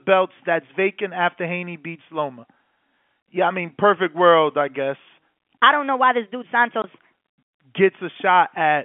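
From 5.60 to 7.12 s a section at the wrong speed runs 1.27 times too fast, raising pitch about four semitones and hurrying the speech, likely from playback against a mismatched clock. Within it, packet loss filled with silence cuts a hard-edged 20 ms gap at 6.82 to 6.84 s, which fits one lost packet, across the narrow 150 Hz to 3.4 kHz telephone band of the G.711 coding.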